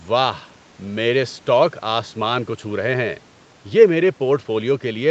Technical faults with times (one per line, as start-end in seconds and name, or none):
none